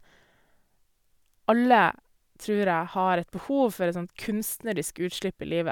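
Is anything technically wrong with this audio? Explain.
No, nothing technically wrong can be heard in this speech recording.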